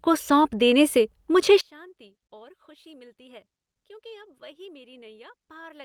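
A speech recording whose level collapses at 1.61 s, right after "सौंप देने से मुझे", and stays down to the end. From that point the centred voice and low end almost disappear, falling by about 29 dB and leaving only a faint residue. This is the signature of one channel inverted: with one stereo side's polarity flipped, the common content cancels on mono summing. The likely cause is a polarity reversal on one channel.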